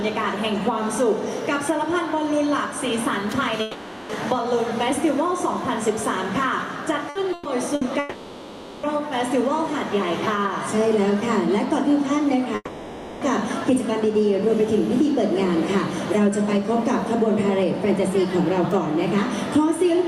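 From 3.61 to 4.12 s the last sound is stretched into a fading buzz or hiss for about half a second, and the audio then resumes further on with that stretch gone. This is likely a long network dropout: nothing arrived, the receiver kept extending what it last had, and the roughly 480 ms in between was never played.

Around 7.1 to 7.8 s the sound stutters three times: a brief held smear at 7.09 to 7.18 s (60 ms), a longer one at 7.33 to 7.48 s (120 ms), and another at 7.75 to 7.84 s (60 ms). Each is a burst of packet loss. The receiver repeats and softens the last sound to cover the gap, then jumps ahead past the missing audio.

Right after, from 7.99 to 8.86 s, another likely long network dropout follows, with a fading fill of about 840 ms. From 12.55 to 13.24 s there is likely a third, about 660 ms, where the concealment dies away into roughly 30 ms of silence before the audio returns.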